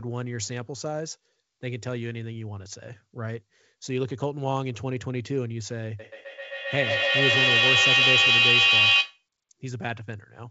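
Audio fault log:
5.99–9.26 s, feedback echo between two devices: speech returns roughly every 150 ms, thinner and ringier each time, and the repeats build to about 9 dB over the talker instead of fading, because a second device's speaker loops into a mic whose canceller can't remove it.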